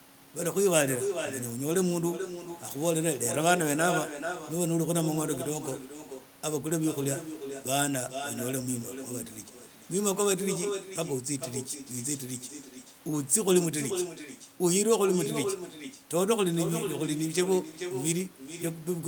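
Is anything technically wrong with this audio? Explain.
Yes. Throughout the speech there is echo with no canceller. The far end is evidently playing the call over a loudspeaker, its microphone picks that sound up, and nothing subtracts it, so the talker's own voice returns after the network round trip. Each phrase is trailed by a copy around 400 ms later, about 9 dB down and thinner. Unlike room reverberation, which smears into a continuous decay, this is a distinct, delayed repeat.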